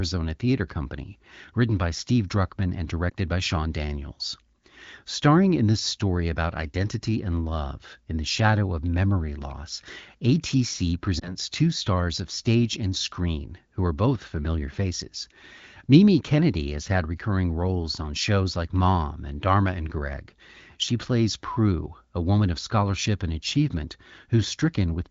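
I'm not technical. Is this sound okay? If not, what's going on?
No. There are two short glitches caused by lost AMR speech frames. This is a phone-call problem. Radio errors spoiled a tiny slice of the speech, and the phone covered the gap by repeating the last good sound at a lower level. The first is at 3.09 to 3.13 seconds, a brief dip or warble. The second runs from 11.19 to 11.37 seconds, just before "two stars of stage". The speech there gives a brief dip or warble, then sounds briefly weak or rough as it recovers. The call itself uses HD Voice.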